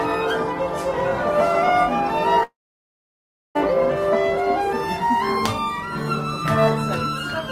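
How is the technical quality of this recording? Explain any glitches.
The recording has one clear glitch: a gap of just over a second where the sound drops out.

Long network dropout, 2.43 to 3.57 s: the sound cuts out for about 1.1 s, most likely because no audio data reached the receiver. The receiver briefly continues the last sound as a fading buzz or hiss, then leaves roughly 1.0 s of silence. When the sound returns at 3.57 s, it resumes further on, so that stretch is permanently missing.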